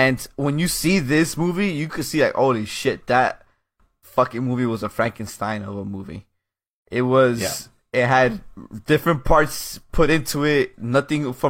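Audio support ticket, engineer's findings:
Speech clip checked by ear, no faults found. Nothing to escalate.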